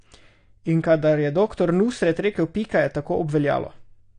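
From start to finish the speech carries plainly audible AAC compression damage, likely from a low-bitrate AAC-LC encode, fitting something around 32 kbps. Nothing survives above about 9.8 kHz, so it sounds dull, and starved quantisation leaves a smeared, warbly, fizzy edge, especially on sibilants.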